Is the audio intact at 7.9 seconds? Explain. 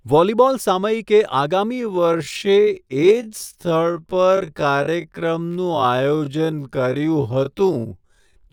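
No. At 7.9 seconds the speech falls inside a time-stretched section that runs from 1.71 s to the end at 8.52 s. Software likely slowed this part to about 0.51 times its original speed, roughly half pace, to fill a longer duration, repeating short slices of the signal to keep the pitch unchanged. The result is speech that drags abruptly from 1.71 s onward at the same pitch.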